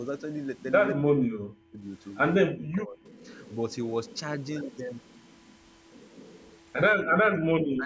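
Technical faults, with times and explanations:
0.93–1.85 s, 2.46–3.03 s and 7.43–7.86 s, speech suppressed in double talk: the talker's level drops by roughly 40 dB, with about a second lost in the first stretch. This is likely an echo canceller that could not tell local speech from loudspeaker echo while both sides talked, so it turned everything down.
3.04–3.74 s, echo leak: a faint delayed copy of the voice trails about 0.18 s behind, about 35 dB below the speech. It is likely residue that a speakerphone's echo canceller failed to remove and sent back down the line.
7.03–7.15 s, background gated by the echo canceller: the room sound drops out by about 38 dB for roughly a tenth of a second, then returns. The canceller clamped the microphone hard while the loudspeaker played and then released it.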